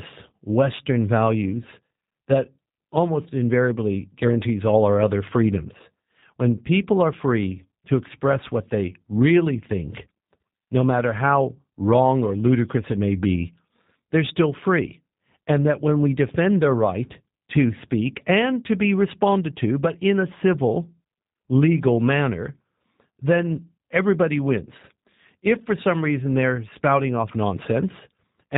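From start to end the speech carries G.729 codec damage: nothing above 4 kHz, and a rough, synthetic quality from the 8 kbit/s pulse-and-filter rebuild.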